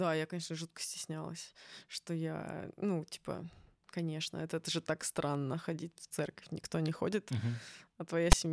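A loud, harsh rasp cuts in at 8.32 s, very near the end of the speech, with hard edges and no fade at either side. It lasts only a fraction of a second, and its energy sits lopsided, pushed off to one side rather than balanced around silence. This is file tags played as audio: a block of text metadata was read by the decoder as if it were sample data, so the character bytes became a raw, one-sided burst of static.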